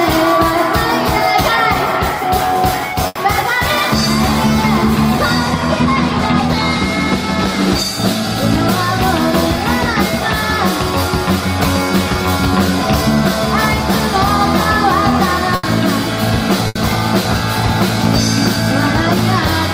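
At 3.07 to 3.18 s, 15.55 to 15.66 s and 16.67 to 16.78 s there is a burst of packet loss. Each time, about 80 ms of audio never arrived, so the receiver stretched the last sound it had and faded it down. This gives a brief smeared, held tail before the sound resumes with that stretch skipped. Unlike a plain dropout, the gap is filled rather than silent.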